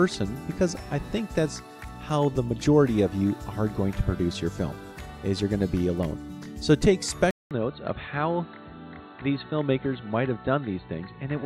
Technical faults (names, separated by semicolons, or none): input switched to a poorer device